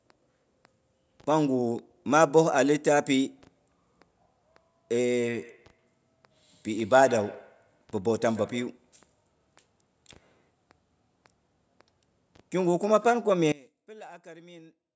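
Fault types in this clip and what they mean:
Feedback echo between two devices: Two devices in the same room share the call, so one plays back what the other's microphone sent and that microphone captures it again. Each device's echo canceller handles only its own playback, so the loop survives. From 5.3 to 8.79 s the speech returns at an interval of roughly 150 ms, with each repeat thinner and more ringing. The strongest return sits about 21 dB below the speech.
One channel inverted: From 13.52 s to the end, the level falls by about 24 dB, and most of the centred speech content drops away, leaving a faint residue. This is likely one stereo channel with reversed polarity. When the two channels are summed to mono, everything they share cancels and only their difference remains. The call's band limit at 8 kHz still applies to that residue.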